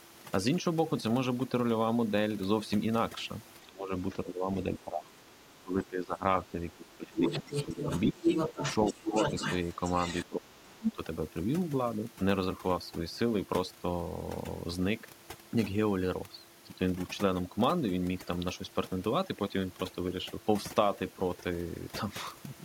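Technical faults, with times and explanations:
Throughout: overdone noise removal. The background drops and breaks up into twinkling specks. Quiet parts of the speech vanish with it.
3.61–3.93 s, 4.24–7.8 s, 8.12–9.15 s, 10.29–10.98 s: speech suppressed in double talk. The speech dips, sometimes by about 20 dB. An echo canceller likely turned both sides down during overlap.
7.16–10.25 s, 10.88–10.92 s: other side's voice leaking through. A second voice comes through at roughly the talker's level, likely loudspeaker echo that the canceller failed to remove.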